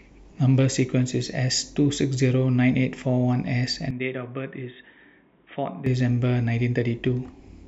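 At 3.91 s the speech turns dull and boxy with no gap at the change, then clears again at 5.86 s. This is most likely an input switched to a poorer device. While it lasts, nothing reaches above 3.8 kHz, the level falls by roughly 10 dB, and a new noise floor sits around 40 dB down. A spectrogram shows the upper band cut off flat for that stretch, and the waveform shows a shrunken envelope.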